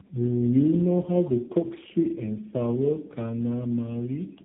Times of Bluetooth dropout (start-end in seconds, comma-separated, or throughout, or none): none